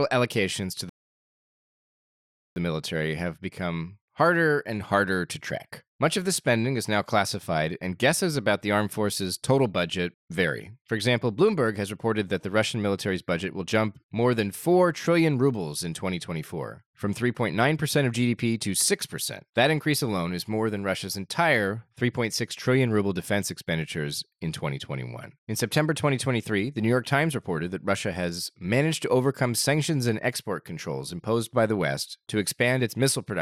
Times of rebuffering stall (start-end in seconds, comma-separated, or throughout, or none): 0.89-2.56